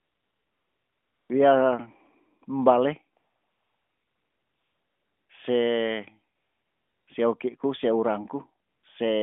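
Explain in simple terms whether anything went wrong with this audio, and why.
AMR comfort noise kicks in at 0.00–1.30 s, 3.18–5.30 s, 6.36–7.08 s and 8.68–8.84 s. The phone thought nobody was talking, stopped sending real sound, and the receiver filled the gaps with smooth, fake hiss.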